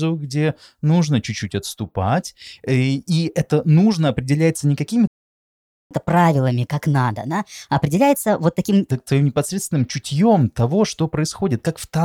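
At 5.07 s, right after "это нужно определяется не", the speech stops dead. Silence lasts 0.83 s, until 5.91 s. This is a playback stall. The player likely ran short of data or was blocked, so output went quiet mid-phrase.

From 5.91 s the speech resumes, but fast. This is catch-up at higher speed. The player resamples its backlog at 1.25 times normal speed. Pitch rises about four semitones, giving a chipmunk quality. Normal speed returns at 8.91 s, before "твоим непосредственным чутьем того".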